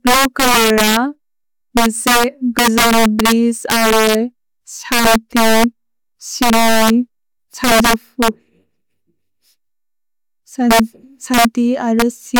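Speech, marred throughout by integer overflow: the signal is pushed about 9 dB past full scale, and a few percent of samples wrap to the opposite extreme instead of limiting, giving harsh cracks on loud syllables. The waveform shows peaks snapping rail to rail, with broadband vertical streaks on the spectrogram.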